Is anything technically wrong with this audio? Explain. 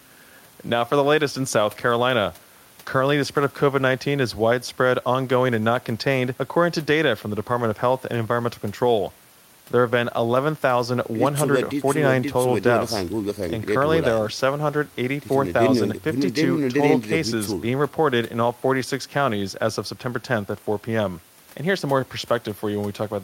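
No, nothing technically wrong stands out here; the speech comes through steady and intact the whole way.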